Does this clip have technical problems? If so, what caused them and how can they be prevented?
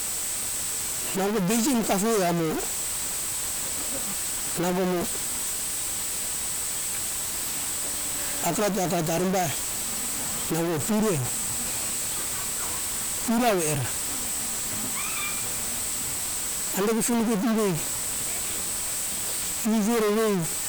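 Yes. A harsh, buzzy distortion runs through the whole speech clip, and the pauses between phrases fill with a gritty noise floor instead of falling silent. This points to a stuck bit, likely a data line or converter bit held at a fixed value, so about half the samples are pushed off by a step of about -20 dBFS. On a waveform, traces show small square offsets jumping with the signal's sign; a spectrogram shows broadband hash smeared over every gap. Checking converter wiring and running a bit-exact loopback test before recording would catch this.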